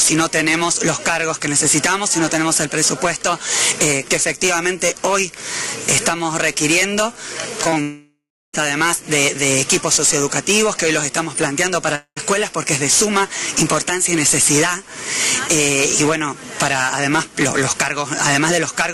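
The audio has a burst of short concealed packet loss at 7.63 to 7.67 s, 7.69 to 7.74 s and 7.74 to 7.78 s. Each hole of about 20 ms was patched by extending the preceding sound, heard as brief smears or wobbles, and seen on a spectrogram as stretched, smoothed harmonics. Right after, at 7.82 to 8.55 s and again at 11.95 to 12.18 s, comes what is likely a long network dropout. About 0.72 s and 0.22 s of audio are missing. The concealment buzz or hiss fades out, leaving roughly 0.32 s and 0.07 s of near-silence, visible as a decaying tail and then a flat, empty band before normal audio resumes.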